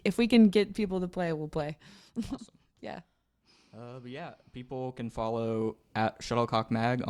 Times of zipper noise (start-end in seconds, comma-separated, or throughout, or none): 1.56-2.08